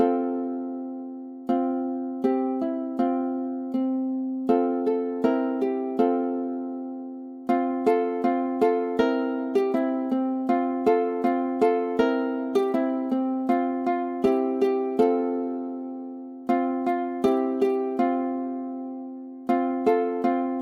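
Listening closely, nothing in the audio stood out as a technical problem at any point.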